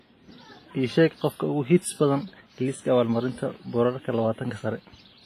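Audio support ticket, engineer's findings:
Ringing, washy speech throughout; hiss breathing with level; nothing above 15.3 kHz. Likely WMA compression: long-block quantisation noise smearing, weak lines zeroed, fits a 24 kbps encode.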